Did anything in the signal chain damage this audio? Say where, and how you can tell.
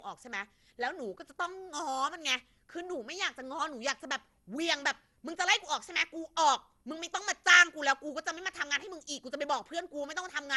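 Yes. The damage sits at the codec stage and runs through the whole speech clip. It has the swirly, hollow smear of generation loss: consonant attacks blur and nothing remains above 11.9 kHz. A single low-bitrate encode would be cleaner than this. The artefacts have piled up, which fits an MP2 stream at 96 kbit/s that was likely decoded and re-encoded around ten times, each pass quantising on a fresh frame grid.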